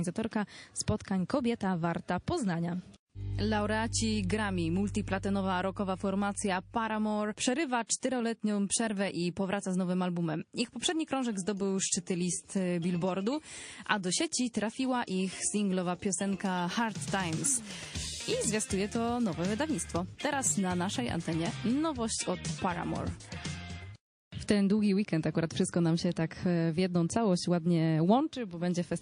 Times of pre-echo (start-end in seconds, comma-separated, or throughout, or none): 0.98-1.00, 7.86-8.03